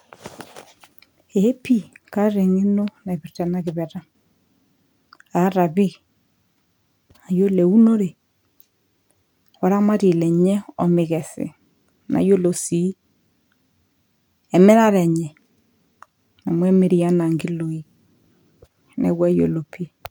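No technical faults can be heard anywhere in the speech recording. There is nothing here to place on a timeline or trace back to a cause.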